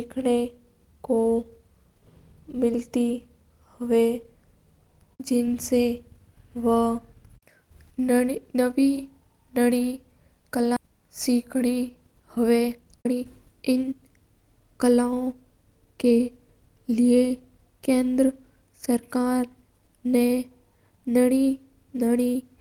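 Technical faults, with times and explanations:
10.76 s, skip ahead: The speech jumps forward with no gap. Roughly 0.7 s of audio never plays. The receiver discarded that stretch while later audio was already queued, likely because the jitter buffer overflowed. The sound on either side of the missing piece is joined almost directly. So the speech lurches abruptly, and part of a syllable or more simply vanishes. The delay drops by about the same amount at that moment.
11.29 to 11.88 s, 12.37 to 13.92 s and 14.76 to 16.19 s, jitter buffer speed-up: The buffer still held more audio than it aims for. It caught up by cutting many short pieces, each one or a few pitch periods long. Pitch stays the same, but the speech runs faster. The rates are 105%, 119% and 106%. The middle stretch, at 119%, sounds clearly hurried. The two outer stretches sound only slightly rushed.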